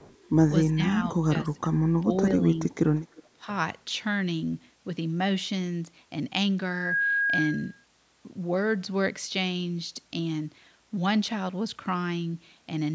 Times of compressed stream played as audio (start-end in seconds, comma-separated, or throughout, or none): none